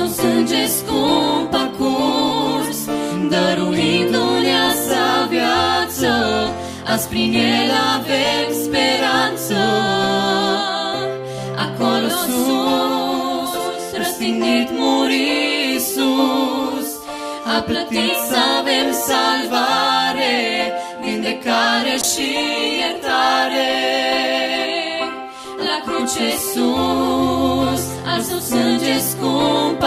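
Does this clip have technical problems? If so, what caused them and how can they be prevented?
Yes, there are two call bitrate drops. From 0.9 to 3.57 s the sound turns coarse and muffled, bottoming out for about 1.6 s, which fits the encoder falling from around 64 kbps to roughly 27 kbps. It happens again from 22.02 to 25.71 s, slightly deeper, near 24 kbps, for about 2.1 s. In both cases the bandwidth estimate sagged and the encoder coded with far fewer bits before recovering. Giving calls steadier bandwidth, such as a wired connection or less competing traffic, prevents this.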